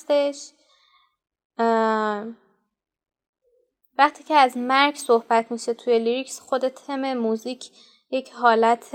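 No technical faults are audible.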